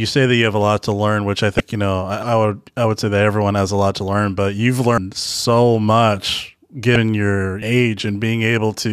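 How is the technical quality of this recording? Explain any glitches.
The recording has two kinds of glitch, each occurring twice, and both break the continuity of the speech.

At 1.57 to 1.60 s, between "to learn which I" and "you know", there is a brief glitch lasting about 30 ms. A similar blip occurs at 6.93 to 6.96 s, just after "so much". Both are damaged data in a compressed stream. Corrupted bytes make the decoder misread the affected frames, lose sync and resume at the next frame header it can find, which causes the glitch.

At 4.98 s, after "to learn but you've" and before "so much", the audio abruptly skips ahead with no silence at the join. A second skip follows at 7.62 s. Each skip drops roughly a third of a second of speech. This is likely audio missing between chunks. A system processing in 3-second blocks can lose a short piece while closing one block and opening the next, and the two ends are then spliced directly together.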